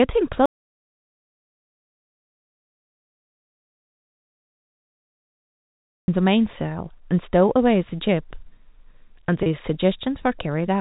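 From 0.46 s to 6.08 s the speech cuts off abruptly into dead silence, with no room tone at all, and then resumes mid-flow. This audio dropout to silence spans about 5.6 s and most likely comes from a lost input whose gap was written as silence.

At 9.43 to 9.46 s, within the telephone-band G.711 sound that stops at 4 kHz, a brief buzzy hold appears on the speech. This is packet loss with pitch repetition: 30 ms went missing, which fits three lost packets, and the receiver bridged it by repeating the last pitch period.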